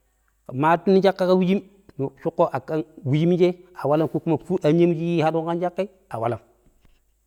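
A speech recording with nothing technically wrong with it.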